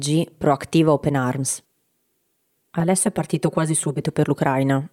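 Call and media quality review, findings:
Lost LE Audio frames at 2.52 s: a short, noisy smear in the speech where the tone goes grainy. About 22 ms of audio is missing, which fits three 7.5 ms LC3 frames. The Bluetooth link dropped packets, and the decoder's concealment filled the hole by replaying the last spectrum with scrambled phase. The gap is too short for the fade-out to finish.

Channel delay (comb filtering), 2.8 to 4.01 s: the speech turns hollow and phasey, like it's coming down a tube. One channel lags by around 5 ms before the mono downmix, so shared content cancels at roughly 100 Hz and every 200 Hz above that. Check the mixer or buffer alignment on the capture path.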